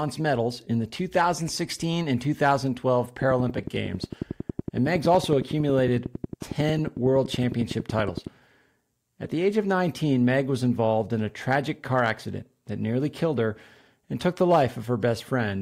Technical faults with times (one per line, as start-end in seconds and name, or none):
2.46-2.53 hard clipping
3.22-8.28 train of clicks
4.96-5.33 hard clipping
9.23-9.31 corrupt frame decoded
11.51-11.55 hard clipping
11.96-12.10 hard clipping
14.52-14.62 hard clipping